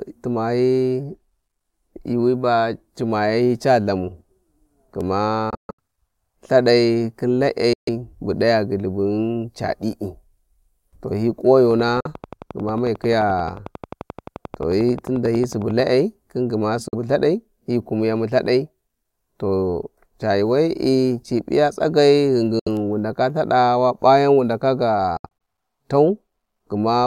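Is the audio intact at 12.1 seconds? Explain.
No. Just after "to hi", a train of clicks runs from 11.71 to 15.81 s: around 50 evenly spaced ticks, about 11 per second, peaking about 5 dB above the speech. They sound like sharp, near-identical pops over the sound and stop before "khin gma", likely from interference or a struggling interface injecting repeated pulses.

Inside that span, from 12.01 to 12.07 s, a Bluetooth dropout leaves a 46 ms silent hole, ending just before 12.1 s. The speech picks up further along, as if it had kept playing. Its length fits two lost audio packets, likely missing their delivery deadline to the headphones.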